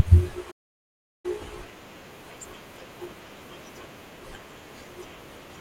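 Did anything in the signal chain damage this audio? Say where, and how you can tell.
Yes, at playback. A playback stall cuts the speech off mid-flow at 0.51 s and leaves about 0.73 s of silence until 1.26 s. A single long, clean gap, not brief scattered holes, points to the player likely starving of data or being blocked.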